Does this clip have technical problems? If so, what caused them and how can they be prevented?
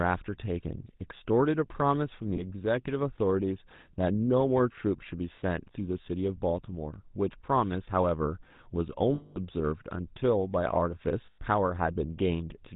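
Yes. Throughout the speech there is the buzzy, gravelly roughness of the GSM full-rate codec, which fits the 13 kbps full-rate coder. It models the voice as a filter excited by a regular pulse train, keeping only every third excitation sample, so the fine detail of the voice is replaced by a coarse, rasping texture. On a spectrogram everything above 4 kHz is empty, and the harmonics below look smeared and grainy. Prevention: use a wideband codec such as AMR-WB, EVS or Opus instead.

Lost GSM frames cause brief dropouts at 2.36–2.43 s, 9.14–9.38 s and 11.26–11.39 s. In each one, the decoder repeats the parameters of the last good frame, so the sound hangs as a metallic ring. The longest is about 220 ms at 9.14 s. On a spectrogram each shows as a frozen, repeated band pattern. Prevention: improve the radio link and use forward error correction or interleaving on the channel.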